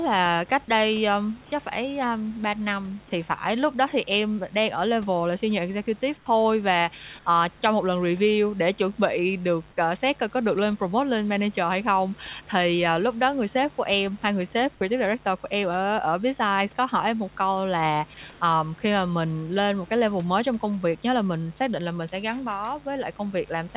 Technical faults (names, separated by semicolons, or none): mains buzz; comfort noise in place of the background